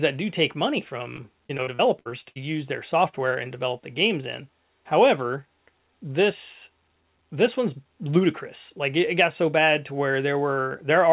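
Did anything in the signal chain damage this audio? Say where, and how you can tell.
Yes. The damage comes from the network: repeated packet loss (robotic sound) between 1.16 and 2.38 s. In that stretch the speech turns choppy, with about ten separate holes, the longest around 62 ms. The receiver bridges each hole by extending the last received audio, so roughly a quarter of the span is synthetic fill. Losses this close together leave too little real signal between patches, which produces the robotic texture. The G.711 call path itself is audible as a band limit at 4 kHz.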